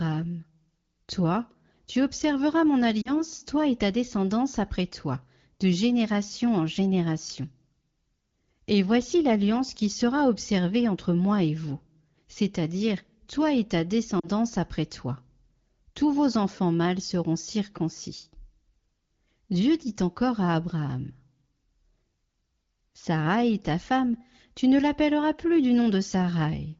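A short dip breaks the speech at 3.01 to 3.14 s, between "tu observeras mon" and "toi et ta descendance", and again at 14.19 to 14.28 s, between "toi et ta" and "après toi". Each is about 40 ms of damaged sound, consistent with two lost 20 ms frames. These are lost AMR speech frames. The wideband decoder, at 15.85 kbit/s, patched each gap by repeating its last good settings at lowered gain, and speech then resumed briefly weak or rough.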